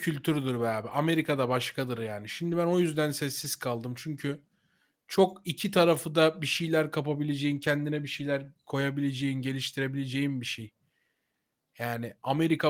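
Lost packets rebuilt from error correction at 0.89–0.91, 2.51–2.53, 3.43–3.45 and 7.55–7.57 s. Each 20 ms gap was filled from a low-bitrate copy, so no dropout is heard, but the sound turns briefly rougher and noisier.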